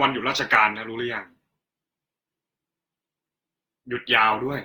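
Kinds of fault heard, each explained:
generation loss: swirly, hollow, smeared speech with blurred onsets throughout, worse than one Opus pass near 48 kbit/s explains, likely from about seven re-encodes.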